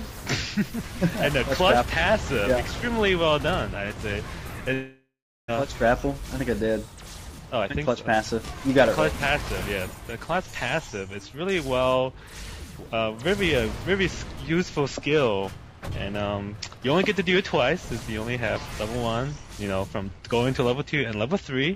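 A long network dropout is the likely cause of the break from 4.73 to 5.50 s. The incoming sound stops. The receiver stretches the last fragment into a decaying buzz or hiss, which then gives way to about 0.4 s of silence. When the audio returns it has skipped ahead, and about 0.4 s of the original never plays. Around 0.4 s of delay builds up behind the interruption.

Jitter buffer speed-up follows, as the receiver works off that surplus delay. It repeatedly cuts out short pitch-period-sized pieces, so the sound runs fast without changing pitch. From 6.05 to 6.63 s it plays at 107% speed, dropping a few tens of milliseconds. From 7.25 to 8.70 s it runs at 117%, shedding roughly 0.3 s, and sounds clearly hurried. From 9.88 to 10.18 s it runs at 110%, losing a few tens of milliseconds more.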